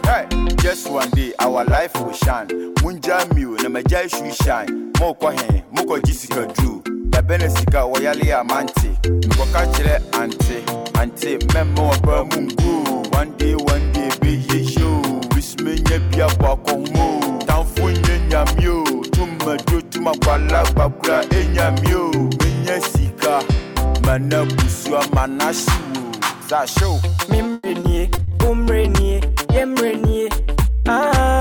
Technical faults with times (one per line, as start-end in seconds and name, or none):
27.53-28.33 repeated packet loss (robotic sound)